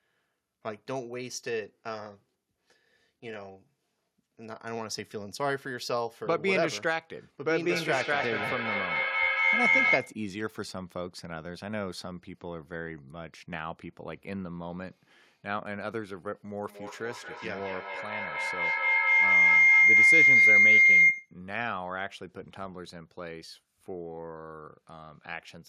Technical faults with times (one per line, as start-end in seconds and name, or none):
7.47-10.26 feedback howl
16.65-21.40 feedback howl